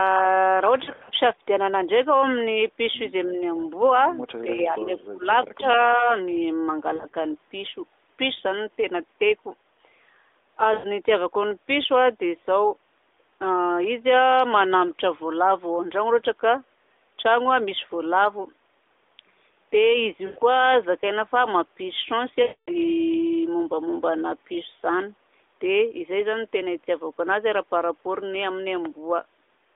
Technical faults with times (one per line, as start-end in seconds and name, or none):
0.84-1.10 lost AMR speech frames
3.36-3.41 speech suppressed in double talk
4.43-5.26 speech suppressed in double talk
5.57-5.65 speech suppressed in double talk
5.99-6.06 speech suppressed in double talk
6.96-7.16 lost AMR speech frames
10.74-10.87 lost AMR speech frames
20.26-20.39 lost AMR speech frames
22.42-22.71 lost AMR speech frames